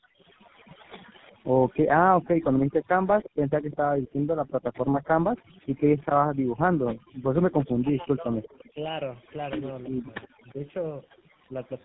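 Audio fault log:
throughout: overdone noise removal. The background drops and breaks up into twinkling specks, because a too-strong noise reducer cut whole frequency bands along with quiet speech detail.
throughout: tandem speech coding. The speech is rough, muffled and warbly with nothing above 3.8 kHz, which points to two speech codecs in a row, AMR-NB and then GSM full rate, with G.711 between them.
0.00–0.22 s and 2.80–7.28 s: background gated by the echo canceller. The room sound dips by about 38 dB and then about 40 dB, for roughly 0.2 s and 1.5 s in total, as the canceller clamps the microphone while the loudspeaker plays.
0.85–1.76 s, 2.83–6.05 s and 8.43–10.53 s: echo leak. A faint copy of the voice trails 348 ms behind, at about 30, 20 and 25 dB below the speech, likely loudspeaker pickup that the far-end canceller left behind.
1.92–2.59 s, 7.78–8.79 s and 9.89–11.53 s: speech suppressed in double talk. 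The talker's voice dips or breaks away in pieces, by about 40, 25 and 35 dB, likely the canceller muting both voices while both sides spoke.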